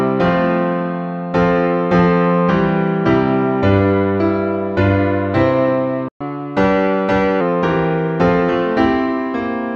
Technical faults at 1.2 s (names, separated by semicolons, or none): none